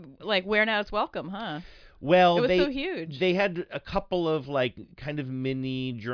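Nothing in this speech recording stood out as a technical problem on listening.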